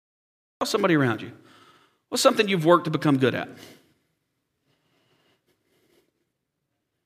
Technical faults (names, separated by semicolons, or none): cut-off start